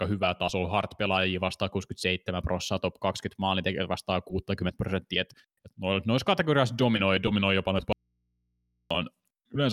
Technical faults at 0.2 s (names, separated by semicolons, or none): none